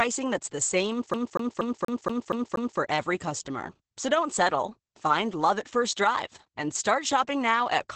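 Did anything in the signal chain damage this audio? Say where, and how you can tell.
Yes. The codec stage damaged the whole clip with Opus voice compression. The speech sounds muffled, hoarse and slightly robotic. Nothing is present above about 8.6 kHz. The heavy coarseness fits SILK-mode wideband coding at a low bitrate, around 10 kbps.

The playback stage adds a skipping CD stuck on one turn. After "that's the same", from 1.14 s to 2.80 s, a 237 ms fragment repeats seven times. Each jump leaves a short mute. Then the speech resumes at "every customer". A scratch keeps throwing the laser back.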